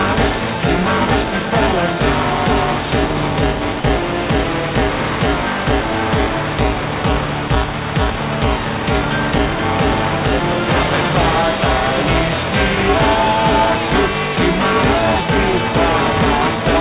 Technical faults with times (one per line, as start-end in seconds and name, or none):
0.00-16.81 buffer tearing
3.80-3.84 sound dropped by the voice detector
7.48 sound dropped by the voice detector